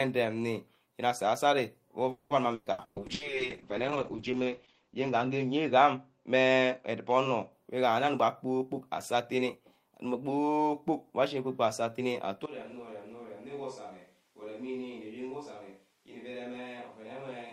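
Speech runs through a chain of call-path faults. From 2.11 to 3.23 s there is repeated packet loss with a robotic sound: five separate gaps, the longest about 190 ms, leave the sound choppy and robotic. Each dropout is bridged by extending the preceding audio, and roughly half of that stretch is synthetic fill rather than real signal, with about 360 ms simply missing. Overlapping the end of that, a call bitrate drop begins at 3.0 s and lasts until 7.58 s. The encoder rate falls from 32 kbps to 7 kbps and sits at the bottom for about 1.5 s. At that rate the coder quantises coarsely and narrows the audio bandwidth from 20 kHz to 8 kHz, so the sound turns dull, rough and watery until the rate climbs back. Between 8.07 and 10.39 s a jitter buffer speed-up is audible. The receiver, holding more buffered audio than its target, repeatedly cuts out short pitch-period-sized slices, around a fifth of a second in total. 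Playback runs at about 108% with pitch unchanged, giving a slightly rushed delivery. From 12.46 s to the end, the sound abruptly becomes roomy and hollow with thinner low end. The level drops by around 10 dB, and room noise sits roughly 30 dB below the speech. The likely cause is a switch to a distant microphone after the close microphone's feed dropped out.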